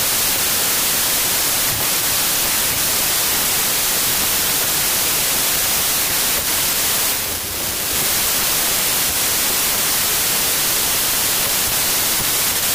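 Speech buried under loud broadband noise, running about 1.33 times fast and raised in pitch throughout: a wrong sample width, which fits packed 24-bit data read as 32-bit. The waveform looks like dense hash and the spectrogram like uniform noise.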